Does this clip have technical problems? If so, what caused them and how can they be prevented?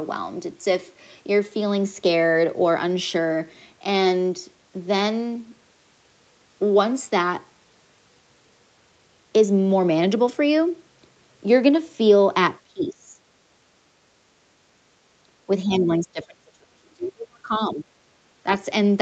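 Yes. The speech dips sharply at 12.65 to 13.2 s, 15.65 to 17.52 s and 17.68 to 17.88 s, by up to about 30 dB. This is likely speech suppressed in double talk. The echo canceller mistook the talker for loudspeaker echo and turned both down. A headset or a stronger echo canceller prevents this.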